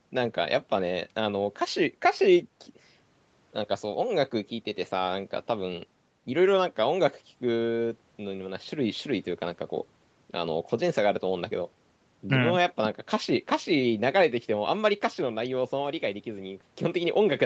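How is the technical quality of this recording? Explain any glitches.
The technical quality of this recording is sound, with no glitches to explain.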